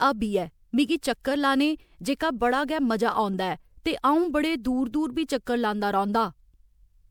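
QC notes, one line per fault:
throughout: generation loss. Speech sounds swirly, smeared and hollow, attacks blur, nothing above 20.8 kHz. This is likely from about seven MP3 decode and re-encode passes, fitting 128 kbit/s. Each pass re-quantises on a shifted frame grid, so noise and spectral holes accumulate.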